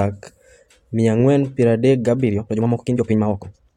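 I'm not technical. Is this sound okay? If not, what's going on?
No. From 2.19 s to the end, the speech plays about 1.89 times faster while the pitch stays the same, likely a time-stretched section where software squeezed this part to fit a shorter length by dropping short pieces. It sounds rushed.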